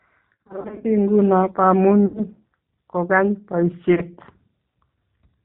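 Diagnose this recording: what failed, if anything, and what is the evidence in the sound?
The codec stage is at fault throughout: the speech has passed through G.729, the G.729A variant at 8 kbit/s, and the damage is plainly audible. The decoder rebuilds each 10 ms frame from a vocal-tract filter, a pitch predictor and a few coded pulses rather than the actual waveform. So nothing above 4 kHz survives, the sibilants lose their edge, and the voice takes on a rough, slightly synthetic texture across the whole clip.

The network stage dropped packets, and the speech decoder filled the gaps with VoIP packet loss concealment. The worst stretch runs from 0.34 to 0.87 s, where roughly 320 ms of audio went missing in short bursts scattered over half a second, none longer than 50 ms. Shorter losses follow at 2.06 to 2.21 s and 3.95 to 4.02 s. In each gap the decoder stretches its last pitch and filter into a buzzy tone or coloured noise that fades. 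Because every frame builds on the previous one, the voice stays weak and smeared briefly after real packets resume.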